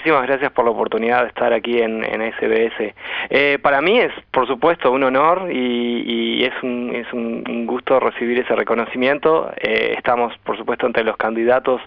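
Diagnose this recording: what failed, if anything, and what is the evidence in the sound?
No fault can be heard.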